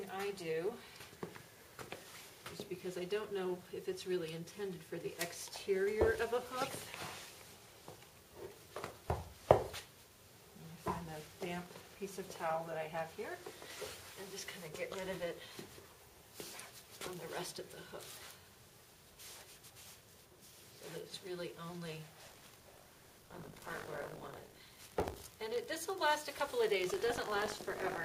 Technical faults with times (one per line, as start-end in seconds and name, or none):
22.26-28.05 buffer tearing